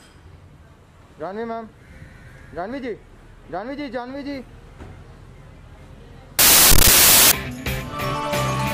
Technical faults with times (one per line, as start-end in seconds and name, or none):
6.39-7.31 samples built from the wrong bytes